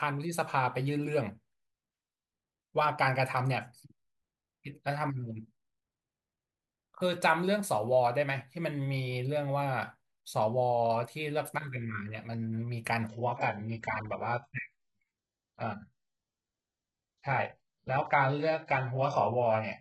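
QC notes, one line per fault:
13.08 to 19.80 s, adaptive stream at a lower bitrate: the connection dipped and the player dropped to a much leaner version mid-stream. Quality falls off abruptly with no gap, nothing above 7.9 kHz survives, and the top end turns synthetic, which fits HE-AAC at something like 8 kbit/s.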